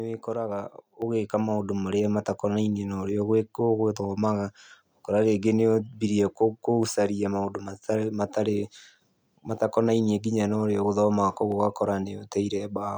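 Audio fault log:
1.02 s, microphone volume stepped up: the input level jumps by about 6 dB in one go, and the speech and the background noise get louder together.
2.33 s, 6.83 s, 11.52 s, dropped samples: single sharp clicks, each likely from a tiny fraction of a millisecond going missing so the waveform jumps abruptly.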